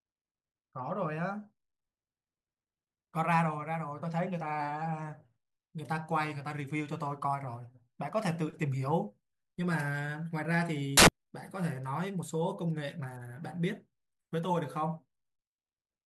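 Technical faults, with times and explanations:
10.97–11.08 s, samples built from the wrong bytes: for about 110 ms the reader assembles each sample from misaligned bytes, whether shifted by one, swapped in order or read at the wrong alignment, so the rapidly changing low-order bits land in the most significant position. The speech is replaced by a harsh burst of loud broadband noise, because those low bits carry almost no structure.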